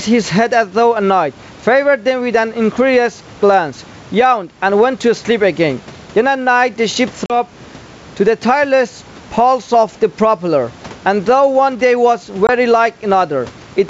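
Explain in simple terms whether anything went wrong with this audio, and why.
Yes, two things went wrong. Throughout, loud and soft parts sit closer in level than they should, and the sound is squashed. This is gain pumping, likely from the microphone level set far too high, with an automatic limiter pulling it down on each loud sound. At 7.26 to 7.33 s and at 12.47 to 12.50 s, the speech drops into abrupt silent holes and comes back slightly distorted. That is packet loss on an ADPCM call: pieces of the call went missing, and the decoder needed a moment to resynchronise.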